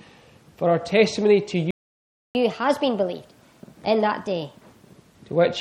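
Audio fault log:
1.71–2.35 s, playback stall: the sound halts for about 640 ms, likely from the player starving for data, then resumes where it stopped rather than skipping ahead.
2.35–4.92 s, catch-up at higher speed: the sound runs 1.25 times fast and about four semitones sharp while the backlog drains, then returns to normal speed, unlike a steady pitch shift.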